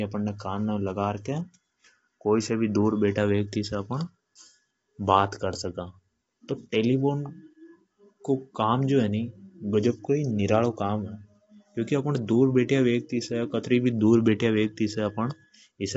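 Low-delay AAC compression runs through this entire speech clip, and the coding damage is plainly audible from start to finish. The likely cause is AAC-ELD, the low-delay codec of video calls, which codes about 500 frequency lines a frame with a low-delay window, and at this low bitrate noise fills in between the voice's harmonics. The sound fits a rate around 24 kbps, and nothing survives above 7.8 kHz, so the top of the voice is cut away.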